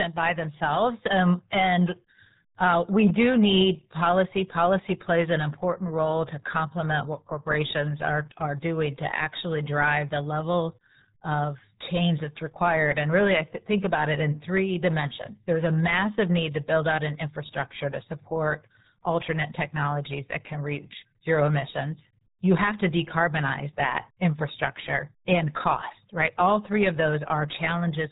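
From start to finish the speech carries the RealAudio 14.4 codec's signature damage. Nothing above 3.8 kHz survives, so consonants lose their edge and the voice sounds muffled, and the heavy coding adds a gargling, watery smear to every syllable, consistent with an 8 kbit/s dial-up-era RealAudio 1 stream. A plain low-pass filter or telephone band-limit would leave the remaining band clean. Here the surviving band itself is mangled.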